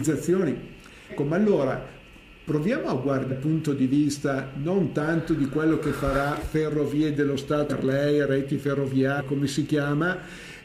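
At 1.09–1.12, 3.28–3.32, 7.69–7.73 and 9.17–9.22 s the sound jumps forward by about 0.2, 0.4, 0.4 and 0.3 s. These are compressed frames skipped: whole frames were lost, and the jumps fit a 46.4 ms frame.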